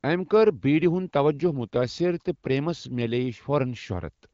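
Nothing goes wrong anywhere in this speech, which comes across with the clear, slightly band-limited character of AMR wideband (HD Voice) coding at one of its higher rates.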